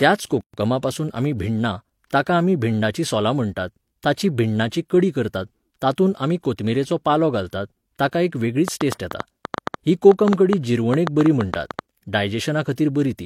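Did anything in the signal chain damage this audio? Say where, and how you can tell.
Yes. At the codec stage there's a gap at a join of encoded pieces: the speech drops out from 0.41 to 0.54 s, about 128 ms, with smeared edges, then resumes where it left off. Separate encodes were butted together without trimming their start delay and end padding.

There's also a train of clicks from 8.68 to 11.8 s, roughly twenty similar ticks at an uneven pace of about 6.75 per second, around 15 dB above the speech and audible in pauses too. The likely cause is interference in the analogue wiring or a faulty connection or power supply.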